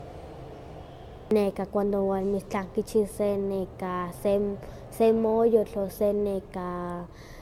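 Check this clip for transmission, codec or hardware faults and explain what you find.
Generation loss runs through the whole speech clip: the sound is swirly and hollow, with smeared consonant attacks and nothing above 17.4 kHz. That likely comes from repeated lossy re-encoding, around five passes, consistent with AAC-LC near 96 kbit/s, each pass requantising on a shifted frame grid so noise and spectral gaps accumulate.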